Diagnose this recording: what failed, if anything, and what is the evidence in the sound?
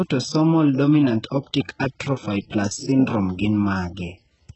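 The failure is at the codec stage, likely HE-AAC compression running at a very low bitrate, which fits something around 8 kbps. The whole speech clip carries heavy coding damage and has no content above 8 kHz. Below that point the codec kept only a thin core band and regenerated the upper range by copying lower bands upward under a coarse envelope. The rebuilt harmonics don't line up with the real ones, so sibilants sound gritty, metallic and lisped.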